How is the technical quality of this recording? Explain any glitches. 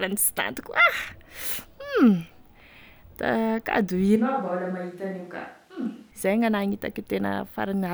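The recording has one clear glitch. From 4.16 to 6.11 s there is likely a switch to a distant microphone, as if the close one dropped out. The sound suddenly turns hollow, roomy and thin, about 10 dB quieter, with room noise rising to roughly 35 dB below it. A plain level dip would not change the tone like this.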